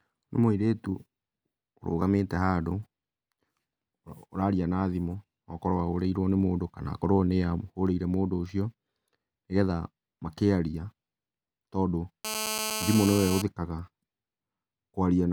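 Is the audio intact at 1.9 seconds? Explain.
Yes, at 1.9 seconds the speech plays through cleanly, with no dropout, click, distortion or other fault audible at that moment.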